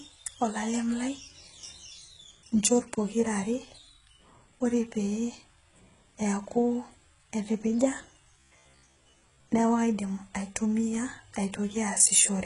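Throughout the recording, the speech has likely passed through HE-AAC compression at a very low rate, consistent with roughly 12 kbps. Only the lower band is truly coded. The treble is regenerated by copying lower bands upward under a coarse envelope, and nothing remains above about 11.1 kHz. The damage is heavy: sibilants come out gritty and lisping, and the upper range has a metallic, synthetic brightness whose overtones do not line up with the voice beneath.

From 8.40 to 9.48 s, new audio stopped arriving on time, and the playback filled the gaps by looping its most recent short buffer while the real signal was dropped. Most of that stretch is repeated material. The 66.7 Hz buzz points to a loop of about 15 ms, likely from repeated short buffers. The speech turns robotic, a rigid metallic drone that only loosely tracks the syllables.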